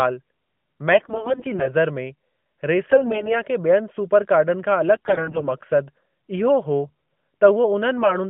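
Speech carried over an AMR-NB narrowband mobile link, band-limited to about 150 Hz–3.4 kHz, breaks up with AMR bit errors at 0.92–1.71 s, 2.88–3.38 s, 4.96–5.48 s (right after "सुपर कार्डन खां अलॻि", the heaviest burst, roughly a fifth of bits flipped) and 7.98–8.16 s. Corrupted unprotected bits misplace excitation pulses and skew gain and spectral values, so pitch and loudness roughly hold while the sound turns hoarse and gargly. A spectrogram shows smeared, broken harmonics and noisy speckle within the band. The waveform envelope stays nearly intact.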